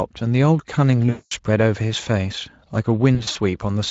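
VoIP packet loss concealed by the speech codec strikes at 1.09 to 1.32 s, a solid 220 ms gap, and at 3.15 to 3.37 s, where 120 ms goes missing in short dropouts of up to 40 ms. The decoder extrapolates its last pitch and filter, so the speech smears into a fading buzzy tone or coloured noise and stays weak as packets return.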